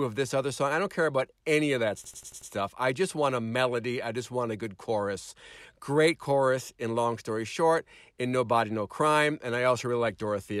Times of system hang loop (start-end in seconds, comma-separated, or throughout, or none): 2.04-2.51